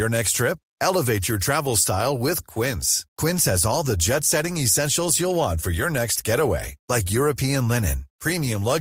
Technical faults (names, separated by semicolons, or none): none